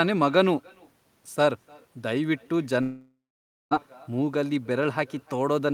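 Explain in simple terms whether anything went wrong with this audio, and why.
Throughout the speech, each phrase comes back faintly about a third of a second later, sounding thin. That is echo with no canceller. Room reverb would blur smoothly instead of repeating as a distinct copy.

From 2.81 to 3.73 s, the speech breaks off. A fading buzz fills the gap, then silence, and it resumes with nearly a second missing. This is likely a long network dropout, not a momentary click.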